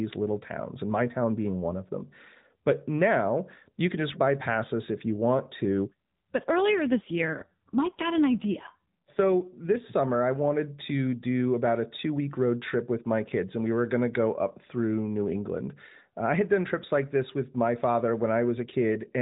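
From 6.44 s to 9.89 s the speech goes through an AMR rate drop. The band stays capped at 4 kHz and there is no gap, but the voice turns rougher and more synthetic, with a buzzy texture. That fits the adaptive multi-rate codec falling from 12.2 kbps to about 5.9 kbps, spending fewer bits on the voice and more on error protection. Normal quality returns just before "I wanted to do".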